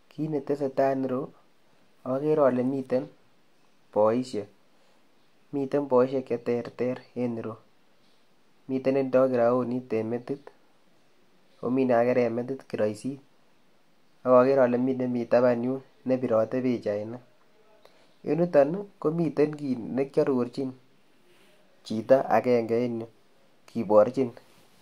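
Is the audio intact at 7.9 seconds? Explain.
Yes, at 7.9 seconds the speech plays through intact, with no dropout, click, distortion or other fault at that moment.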